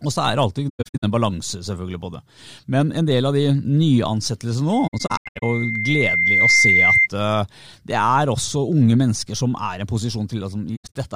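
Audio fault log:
0.69–1.04 s, 4.87–5.43 s, 10.76–10.96 s: AAC frame loss with muting. Lost frames were decoded as silence, so the speech drops out in soft-edged holes totalling 277, 341 and 149 ms, with runs up to about a tenth of a second. The overlapping transform windows fade each gap in and out.
4.73–7.08 s: loudspeaker feedback squeal. The microphone is picking up its own loudspeaker, and at 2.1 kHz the loop gain exceeds one. That tone swells over roughly a second and a half until it sits about 5 dB above the speech.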